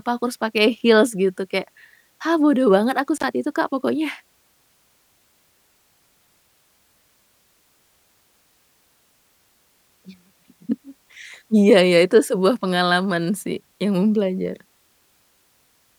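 At about 3.17 s there's an intermittent contact: a loose cable or plug briefly opens, cutting the speech out for roughly 57 ms with crackle either side.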